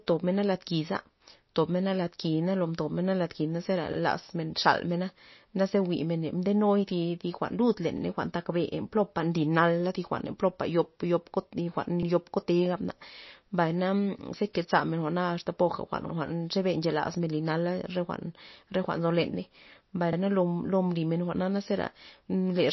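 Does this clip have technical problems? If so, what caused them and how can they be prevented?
Yes. Throughout the speech, nothing is heard above 5.8 kHz, and the sound turns watery and swirly, with smeared consonant attacks. This is likely MP3 compression at a starved bitrate, near 28 kbps. The fixed treble cutoff and flickering frequency content set it apart from simple low-pass filtering. Encoding at a higher bitrate or with a better codec prevents it.

Overlapping chunks cause a brief stutter at 3.93, 7.98, 12.03, 16.08 and 20.13 s, where 50 ms of sound plays twice. Each 4-second chunk begins before the previous one ends. Unlike dropouts, nothing is missing, and the repeats fall at regular intervals. Trimming or crossfading chunk overlaps before joining prevents it.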